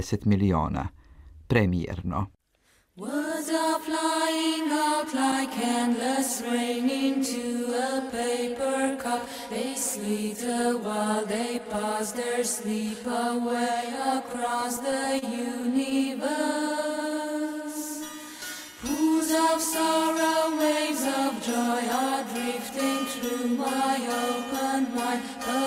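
Between 14.33 and 15.24 s the sound hits repeated stalls (stutter): seven brief holds, the longest about 30 ms, adding up to 85 ms and roughly a tenth of that stretch. Packets reached the receiver late, so its jitter buffer kept running dry and it stretched the last sound to bridge each wait. Unlike packet-loss dropouts, nothing is cut away. The audio simply catches and drags, a jerky hesitation rather than holes.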